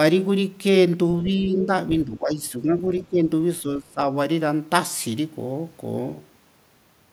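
At 1.25 to 1.31 s, a faint scrap of a second voice leaks through, roughly 20 dB below the talker. This is the other side's voice leaking through. The far end likely plays on a loudspeaker, and the echo canceller leaves some of it in the microphone signal. A second, even fainter scrap appears at 2.99 to 3.03 s, around 25 dB down.

The talker's own voice then dips at 1.37 to 1.7 s, by a few decibels. This is speech suppressed in double talk. Both sides are likely talking at once, and the echo canceller cannot separate the talker from the echo, so it turns both down. A deeper dip of about 10 dB follows at 2.05 to 2.82 s. Another brief dip of about 10 dB comes at 3.05 to 3.19 s. The strongest, near 20 dB, comes at 3.62 to 4.01 s.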